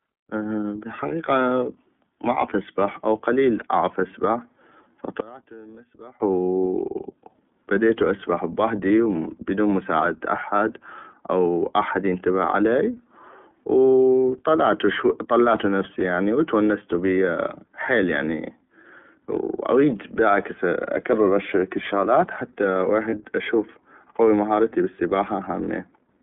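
Throughout, the iLBC codec narrows the speech to about 200 Hz to 3.4 kHz and leaves it rough and synthetic. A spectrogram shows nothing above 3.4 kHz, which fits iLBC's 13.33 kbps mode.

From 5.20 to 6.20 s the sound drops by about 23 dB to a faint residue, most likely one channel inverted and cancelling in the mono sum. The waveform collapses to a small envelope there.

From 23.10 to 23.14 s, just before "اشوف اقوي مهارتي بل", lost iLBC frames leave a brief held vowel, slightly buzzy or breathy. This fits a single 30 ms frame concealed by pitch repetition, visible as one smeared harmonic slice.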